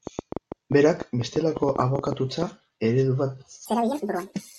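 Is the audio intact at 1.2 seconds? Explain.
No, 1.2 seconds sits inside a train of clicks that runs from about 0.07 to 2.43 s. Something keeps injecting short pulses, about 7.7 per second at an uneven pace, roughly twenty in all, likely electrical interference from nearby gear or a faulty connection or power supply. They're similar in shape and stand roughly 10 dB above the speech, so you hear a ragged ticking or popping laid over it, pauses included.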